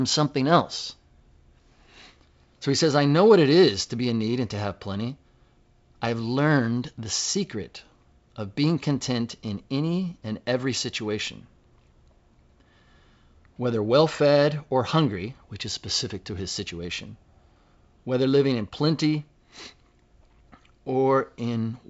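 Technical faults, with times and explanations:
No technical faults can be heard in this speech clip. It comes through G.722 wideband telephone coding at what sounds like the full 64 kbit/s rate, with the speech band ending at about 7.7 kHz and nothing above it.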